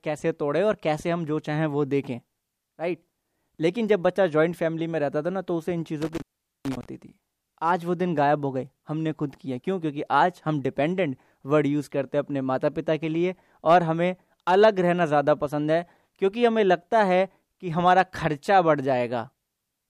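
From 6.02 to 6.85 s the speech is disrupted by an intermittent contact fault: a loose cable or plug briefly loses connection, and the signal drops out for about 0.43 s within that span. Crackle marks the break and the reconnection, and faint hiss remains while the line is open. On a waveform the speech collapses to a near-flat trace bracketed by sharp spikes; a spectrogram shows thin broadband vertical streaks at each edge around a low, even noise floor.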